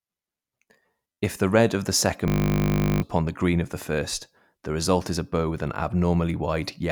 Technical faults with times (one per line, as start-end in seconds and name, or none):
1.13-1.17 repeated buffer
2.28-3.02 system hang loop
3.83 repeated buffer